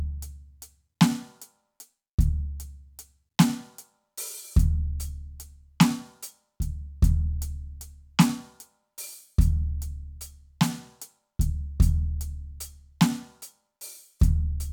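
Nothing technical goes wrong anywhere in this music, so there's no fault to point to at any moment.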